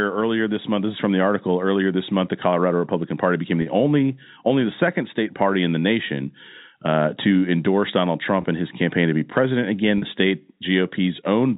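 Packet loss with pitch repetition at 3.62 to 3.66 s before "only only the second", 8.42 to 8.44 s before "in his campaign to", and 9.98 to 10.02 s after "to be president again". Each 20 to 40 ms gap is bridged by repeating the last pitch period, giving a brief held, buzzy tone.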